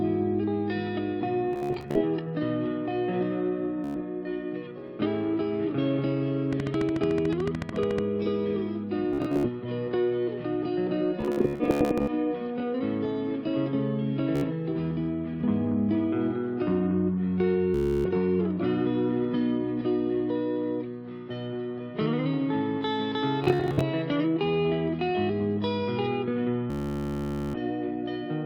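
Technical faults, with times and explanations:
1.53–2.02, 3.84–3.96, 9.13–9.49, 11.21–12.13, 14.36–14.44, 17.74–18.06, 23.44–23.83, 26.70–27.57 s, Bluetooth stutter: the audio stream dropped out and the receiver kept replaying its last short slice. This produced a buzzing, machine-gun repetition that filled between 70 and 840 ms of lost sound, and after each one the audio jumped ahead. Unlike clicks, stutter repeats the sound itself and skips part of it.
6.53–7.99 s, train of clicks: about twenty near-identical pulses, evenly spaced at roughly 13.7 per second and peaking about 10 dB above the sound. They are likely caused by electrical interference. These ticks sit on top of the audio while it plays on intact, with no repeats and no skipped material.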